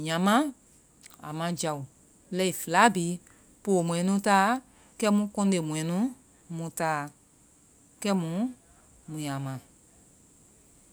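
Speech recording with no technical faults detected anywhere in the clip.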